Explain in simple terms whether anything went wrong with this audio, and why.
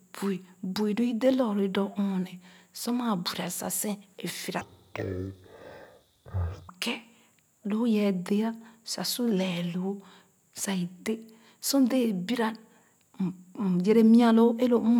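Between 4.61 and 6.68 seconds, the speech suddenly slows to half speed and drops a full octave lower. It sounds deep and dragged out. This is a fault called stereo read as mono. A stereo recording stores left and right samples taken in turns. Here, those paired samples were played back one after another as if they were a single channel. Twice as many samples play per moment of sound, so everything stretches out and sinks in pitch.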